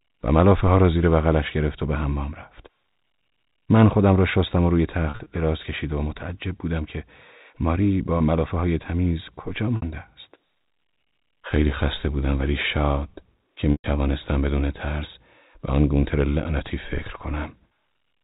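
Packet loss with pitch repetition hits at 5.1 to 5.26 s (gaps scattered, longest 40 ms), 8.18 s, 9.76 to 9.82 s and 13.72 to 13.84 s. The receiver loops the last pitch period, giving brief held buzzes, and fades into silence during the 120 ms loss.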